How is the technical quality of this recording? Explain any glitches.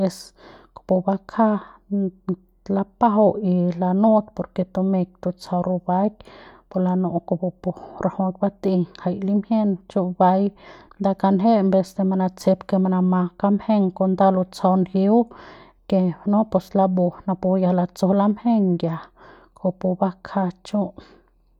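Listening through the recording, nothing stood out as a glitch or technical problem.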